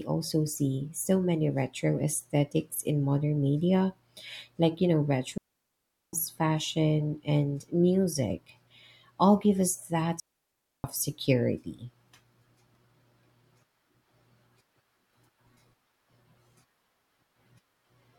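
Speech with two digital wireless dropouts, at 5.38 to 6.13 s and 10.20 to 10.84 s, lasting 0.75 s and 0.64 s. Each is a clean hole of near silence with no noise burst, as the receiver muted quickly after losing too much data over the link.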